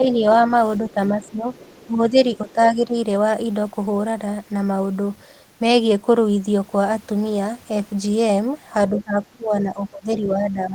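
From the start to 1.46 s the talker's speech sinks by around 10 dB in patches, and again from 1.86 to 2.95 s, thinning and dipping for a good part of each stretch. From 8.9 s to the end it drops harder, by about 20 dB. This is speech suppressed in double talk. Both ends were likely speaking at once, and the echo canceller, unable to tell the local talker from the loudspeaker echo, pulled down the whole signal.

Between 1.24 and 1.85 s a faint second voice sits well under the talker, roughly 25 dB down, and a brief scrap at about 2.5 s is fainter still. This is the other side's voice leaking through. The far end is played on the talker's loudspeaker, and the echo canceller likely left a residue of it in the microphone signal, so fragments of that voice slip into the send path.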